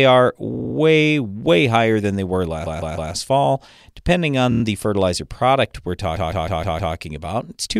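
Repeated frames show up four times as stutters: 0.54–0.75 s (a 52 ms slice looping), 2.65–3.12 s after "higher than they were" (157 ms), 4.51–4.61 s before "the fertilizer product we're" (26 ms), and 6.15–6.94 s after that phrase (157 ms). Each time the same compressed chunk replays back to back, and the clip stretches by the replayed time.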